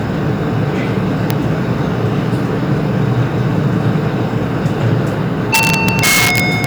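Integer overflow strikes at 1.30 s and again from 5.54 to 6.64 s, where peaks exceed the limit by about 4 dB. Instead of being held at full scale, those samples wrap to the opposite sign, jumping across the whole range and producing sharp, violent cracks harsher than clipping.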